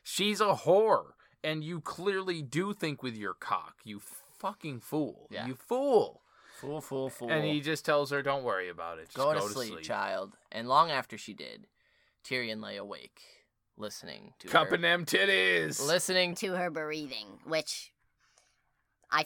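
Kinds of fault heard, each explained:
Section at the wrong speed: from 16.33 s to the end, the speech turns hurried and higher, running 1.21 times too fast and about three semitones sharp, with pitch and tempo shifting together. This stretch was likely played or resampled against the wrong clock.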